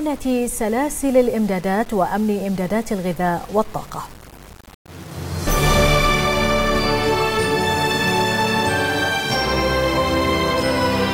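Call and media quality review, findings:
Grainy distortion throughout, tracking the signal level; quiet passages gritty, faintest parts sputtering or dropping to silence. Likely low bit depth without dither, about 6 bits, rounded, error near -25 dB. Unlike hiss, it vanishes in silence and moves with the sound.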